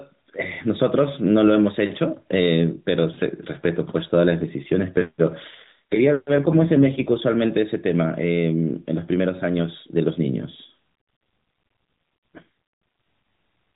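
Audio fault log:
5.50–7.24 s and 12.34–12.43 s, AMR rate drop: the speech turns buzzier and more synthetic, with the same narrow band and no gap, then clears. The codec spent fewer bits on the speech, which fits a drop from 12.2 to 4.75 kbps.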